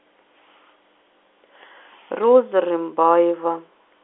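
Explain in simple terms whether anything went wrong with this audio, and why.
Between 2.2 and 2.28 seconds a short burst of sharp ticks and crackle sits on top of the speech. These are bit errors on a digital phone line: a tiny share of the bits carrying the call were flipped, throwing single sound samples to wrong values.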